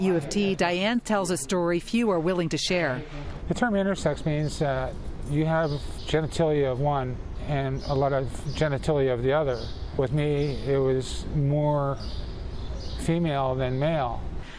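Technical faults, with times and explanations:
No technical faults are audible.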